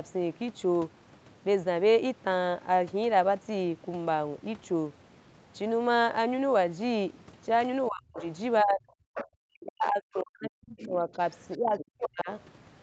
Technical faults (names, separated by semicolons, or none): speech suppressed in double talk; other side's voice leaking through